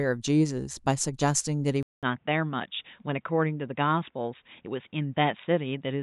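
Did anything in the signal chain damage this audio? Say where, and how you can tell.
Yes. At 1.83 s the speech drops out for 200 ms, then returns duller, slightly quieter and with a new, faint background noise. Nothing reaches above 3.8 kHz from there to the end. This points to the driver likely switching input to a poorer device.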